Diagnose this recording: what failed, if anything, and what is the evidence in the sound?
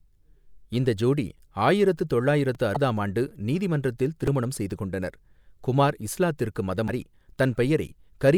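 Two repeated-buffer faults in the driver or buffer stage, clicks at 2.55 s and 4.27 s. A 2.9 ms chunk replays, once then twice, which fits a 128-sample buffer.

Damaged data in the compressed stream, a codec or storage fault, gives brief chirps at 2.73–2.77 s and 6.85–6.89 s as the decoder misreads frames and resyncs.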